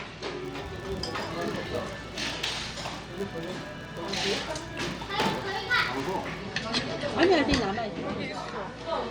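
From 0.42 s to 6.43 s, a filter restarted on every block adds a buzz at 100 Hz. Each block starts from silence, producing regular ticks that track the sound's level.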